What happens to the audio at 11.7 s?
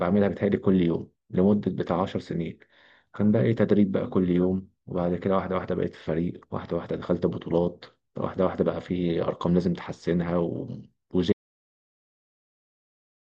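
At 11.7 s the speech is inside an audio dropout to silence. The input was likely lost, through a disconnected device, failed link or mute, while recording carried on writing silence. From 11.33 s to the end the speech cuts off into total silence, with no room tone.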